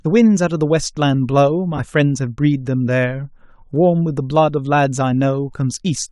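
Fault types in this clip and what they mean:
Lost LE Audio frames: at 1.77 to 1.80 s, about 20 ms of speech is replaced by the previous spectrum replayed with random signs, giving a noisy smear that fits two 10 ms frames. Spectrograms show a blurred band where harmonics vanish; the waveform turns ragged.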